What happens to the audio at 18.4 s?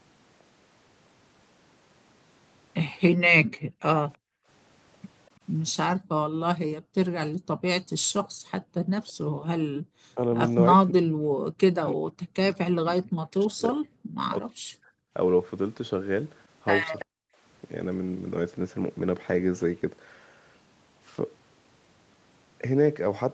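Nothing goes wrong at 18.4 s: the speech there passes through the call's microphone processing and Opus call path intact, with no dropout, glitch or distortion at that moment.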